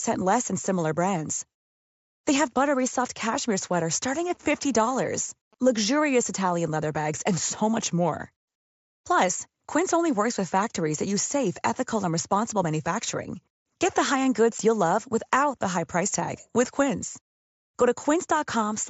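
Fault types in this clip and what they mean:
GSM signalling bursts: A faint galloping dit-dit-dit of short buzzes near 217 Hz from 4.35 to 5.78 s, after "soft cashmere sweaters starting", as the audio circuit rectifies a nearby 2G phone's radio bursts.
Unconcealed Bluetooth headset packet loss: A 7.5 ms hole with abrupt edges at 14.58 s, where one voice packet between headset and phone was lost and nothing was filled in to hide it.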